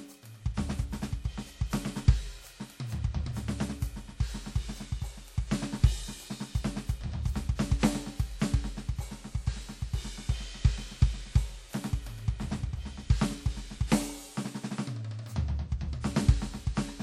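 Throughout the music, the sound rings and smears, with a washy hiss that swells and fades with the signal, and nothing reaches above 16.8 kHz. This is likely WMA compression: long transform blocks spread quantisation noise, and the damage fits a low bitrate near 48 kbps.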